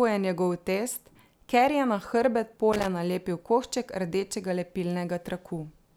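Loose connector crackle breaks into this speech clip from 2.73 to 2.87 s, right after "ker je na hrbet" and just before "nalepil košček rdečega". For about 0.15 s the audio turns into an irregular burst of scratchy crackle. A worn or dirty contact somewhere in the cable path was making and breaking as it shifted, chopping the signal on and off. Any DC sitting on the line would turn each reconnection into a pop.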